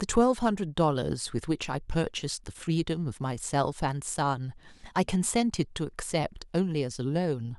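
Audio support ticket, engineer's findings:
Listened through the whole speech recording and found nothing amiss, so no faults to log on this ticket.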